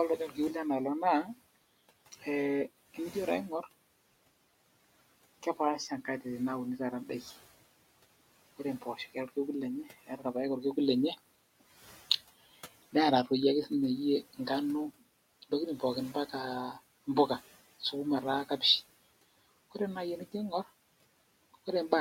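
The noise suppressor mistook parts of the speech for background and turned them down, so speech was cut by the noise suppressor three times: from 0.18 to 0.37 s by about 10 dB, from 8.81 to 9.37 s by about 14 dB, and from 10.05 to 10.25 s by about 15 dB, each affecting roughly a tenth of a second or more. Those moments sound swallowed and faint, dipping toward the room noise that sits about 21 dB beneath the speech.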